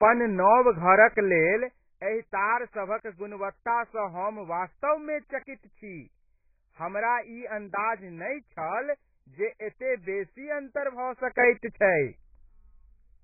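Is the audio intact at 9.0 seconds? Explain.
No. At 9.0 s, as throughout the speech, there is heavy damage that is likely AAC compression: nothing survives above 2.5 kHz, which fits a bitrate near 12 kbps. Quantising frames against a hearing model leaves dull, smeared sound with a warbling or fizzy texture, unlike the clean band edge of a plain low-pass filter.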